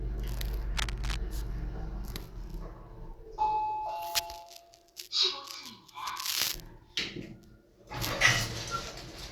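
From 0.72 to 1.16 s, cable scratch noise rustles and scrapes over the sound, nearly as loud as it. A worn cable or connector shifting, its contact resistance jumping, is the likely cause. A spectrogram shows ragged broadband streaks, and the waveform shows jagged, irregular spikes.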